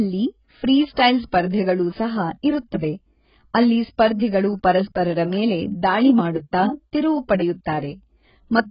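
Heavy AAC compression likely starved the whole clip's spectrum: nothing remains above 5.1 kHz, which fits a bitrate near 12 kbps, leaving the speech dull, smeared and fizzy.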